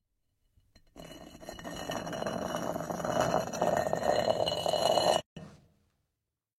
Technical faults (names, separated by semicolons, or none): gap at a join of encoded pieces